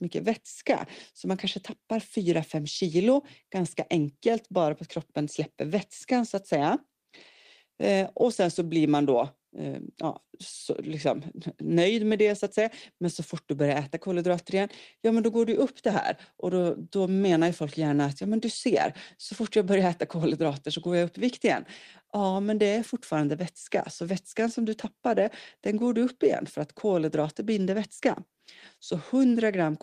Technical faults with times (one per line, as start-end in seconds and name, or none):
none